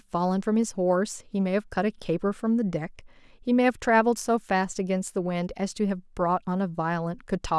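No technical faults can be heard anywhere in the speech.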